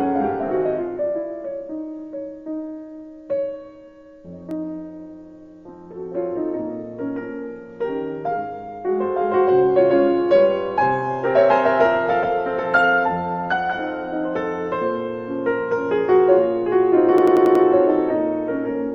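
At 4.51 s a single sharp click marks dropped samples, likely a gap of well under a millisecond where the waveform jumps abruptly to a later value.

From 17.18 to 17.65 s a system hang loop repeats one 92.9 ms segment five times, a 10.8 Hz machine-gun stutter that fits a 4096-sample ring buffer.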